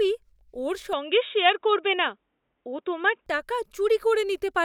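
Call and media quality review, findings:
Input switched to a poorer device, 0.93–3.26 s: speech turns dull, nothing above 3.8 kHz, no gap, level unchanged, faint new noise floor; likely a narrowband headset call profile.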